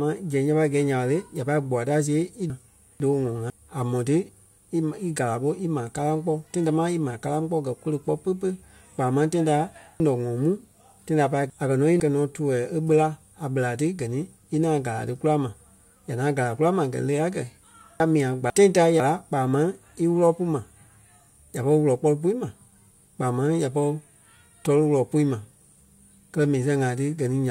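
At 2.5 to 3.5 s, 10.0 to 12.0 s and 18.0 to 19.0 s the speech jumbles briefly. These are chunks out of order: a 500 ms chunk arrives late and plays after one, three and one following chunks respectively, so nothing is lost but the sequence is scrambled.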